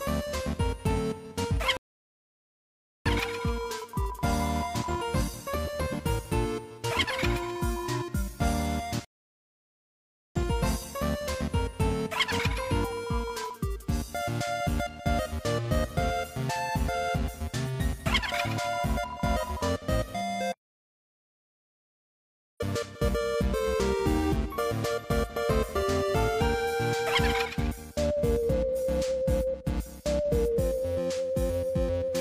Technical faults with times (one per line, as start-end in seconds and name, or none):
1.77-3.06 rebuffering stall
9.05-10.36 rebuffering stall
20.53-22.60 audio dropout to silence